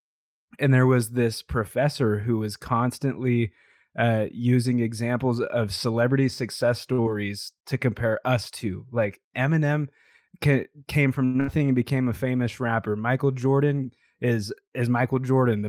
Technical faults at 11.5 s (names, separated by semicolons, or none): burst of packet loss